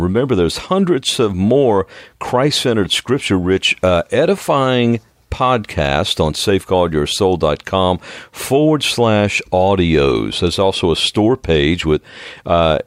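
No technical faults can be heard at any point, so there is nothing to describe in time order.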